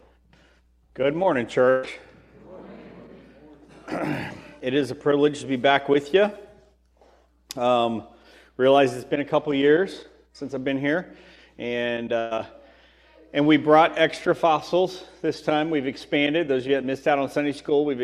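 Burst of packet loss occurs at 1.69 to 1.85 s and again at 12.19 to 12.33 s. Each time the receiver stretches the last sound for about 135 ms and 118 ms, fading it down, before the audio jumps ahead with roughly 140 ms and 120 ms missing.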